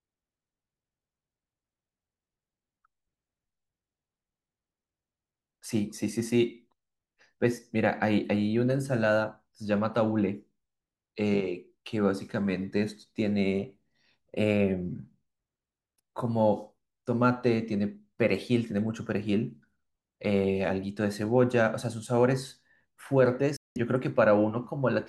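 At 23.56 s the speech drops out for about 0.2 s, a digital broadcast dropout: the receiver lost valid frames and muted with a 3 ms fade, so that audio is lost.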